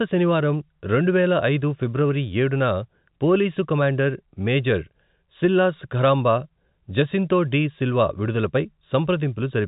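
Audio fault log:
No fault to log: the speech comes over ordinary G.711 telephone coding, with nothing above 3.8 kHz.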